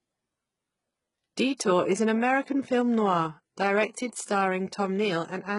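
From start to finish the speech carries the sound of HE-AAC compression at heavy damage, and its treble stops dead at 11.1 kHz. The high band is present, but on s sounds it turns gritty and metallic rather than simply dull. That points to the likely cause, spectral band replication: the top is synthesised from copied lower bands, consistent with a very low bitrate around 12 kbps. A plain low-pass filter would sound muffled rather than synthetic.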